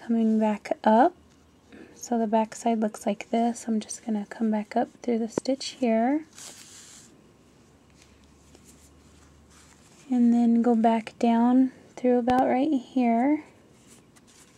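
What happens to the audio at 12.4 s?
A loud pop occurs at that point: two sharp pops in quick succession between 12.30 and 12.41 s, landing on top of the sound, which continues underneath. They stand out strongly, peaking somewhere around 15 dB above the surrounding level. The likely cause is a sudden voltage step or pulse, such as a plug, switch, static discharge or driver glitch, added to the signal. A waveform would show two tall, narrow spikes, and a spectrogram would show two thin vertical streaks spanning the frequency range.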